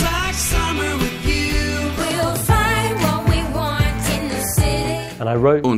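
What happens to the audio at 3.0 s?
DAB burbling, 2.92 to 3.08 s: stray bit errors corrupt MP2 sub-band data, giving brief blips of noise, unlike the steady swirl of low-bitrate coding.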